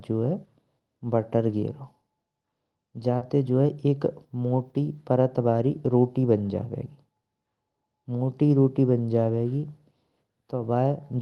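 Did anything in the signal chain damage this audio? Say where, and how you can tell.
Yes, the damage happened on the network side of the call. Around 3.17 to 3.23 s there's short concealed packet loss: about 40 ms of the audio never reached the decoder in time, so the receiver patched the hole by carrying the preceding sound forward and then easing back into the real signal. You hear it as a quick smear or wobble right there rather than a clean dropout.

Right at the tail of that, from 3.21 to 3.23 s, there's a lost packet rebuilt from error correction. That 20 ms stretch, which fits a single lost packet, was played from the low-bitrate backup copy Opus tucks into the following packet. So there's no gap, but that sliver sounds rougher and grainier than its neighbours. The usual Opus coding texture, with the top end stopping at 12 kHz, sits under the whole clip.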